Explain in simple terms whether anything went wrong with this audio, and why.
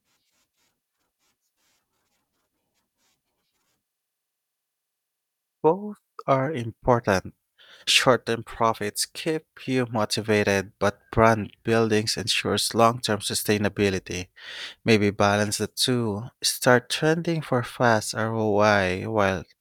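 Nothing went wrong; the recording sounds as it should.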